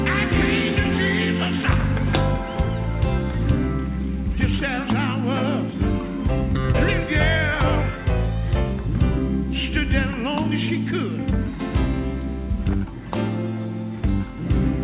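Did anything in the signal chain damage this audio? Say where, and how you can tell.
No, nothing in the chain damaged this audio: it arrives through a call path whose band stops at 4 kHz, consistent with a 64 kbps G.711 A-law telephone codec working as intended, and no stage leaves any further mark on the signal.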